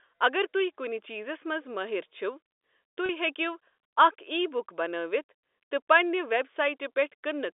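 Speech carried over a narrowband telephone line, consistent with G.711 coding, has two brief dropouts from packet loss with pitch repetition, at 3.06 to 3.09 s and 5.40 to 5.43 s. Each gap lasts 30 ms, which fits a single lost packet, and the receiver fills it by repeating the last pitch period. Both gaps are short enough to sound like a momentarily held, slightly buzzy tone rather than silence.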